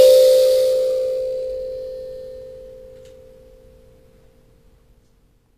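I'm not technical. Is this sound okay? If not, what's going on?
No. The music has plainly audible damage throughout, likely from HE-AAC compression. The treble is rebuilt from copies of lower sounds rather than kept. So cymbals and bright sounds turn gritty and metallic. Nothing at all comes through above about 15 kHz.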